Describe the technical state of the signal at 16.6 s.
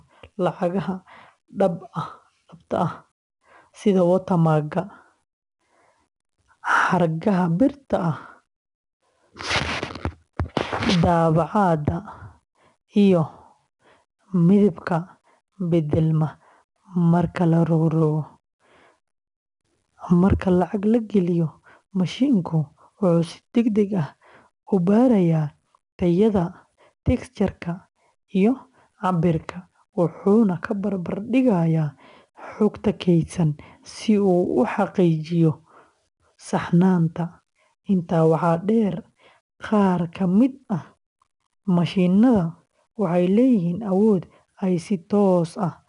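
At 16.6 s the sound carries 4-bit ADPCM compression, present across the whole clip. Each sample is coded as a coarse step from a prediction. This leaves gritty hiss riding on louder speech. Nothing sounds above about 10.7 kHz. The result is dull and fits a rate near 89 kbps.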